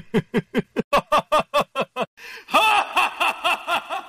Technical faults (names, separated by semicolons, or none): none